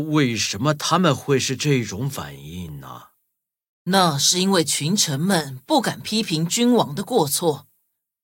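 At 2.69 s, overlapping chunks replay about 6.5 ms of speech at a join between 3-second blocks, producing a brief click-like stutter rather than a dropout's gap.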